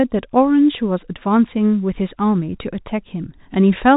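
Nothing stood out on listening to this speech; the narrow telephone band of its G.711 coding is all that marks the sound.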